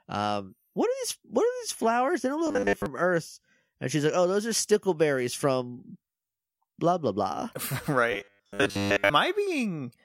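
At 2.47–2.86 s and again at 8.12–9.13 s the speech collapses into a rigid 100 Hz metallic buzz, robotic sound likely from repeating 10 ms buffers while most real audio is skipped.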